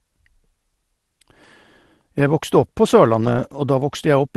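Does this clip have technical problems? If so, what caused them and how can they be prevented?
Yes. From 3.21 to 3.59 s, lost packets were rebuilt from Opus in-band error correction. The decoder played low-bitrate backup copies, so the speech continues without a gap but sounds rougher and noisier. Prevention: improve network stability or add jitter-buffer headroom so fewer packets are lost and the full-quality frames arrive.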